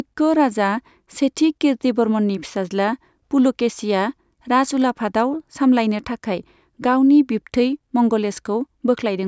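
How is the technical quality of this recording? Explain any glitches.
No glitches or faults audible.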